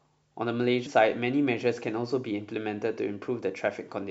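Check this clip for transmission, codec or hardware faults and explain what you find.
One codec fault is present: compressed frames skipped at 0.85 s. About 150 ms of speech is missing, consistent with roughly five 26.1 ms frames being absent or rejected as damaged. The audio jumps ahead at the join. A spectrogram shows an abrupt discontinuity in harmonics and formants, and the waveform shows a jump.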